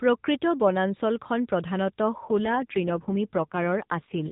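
An AMR rate drop hits this speech clip from 2.24 s onward. The mobile network has forced a leaner coding mode, which fits a step from 12.2 kbps to 5.9 kbps. Fewer pulses model each frame, so the voice turns buzzier and more synthetic, without a gap.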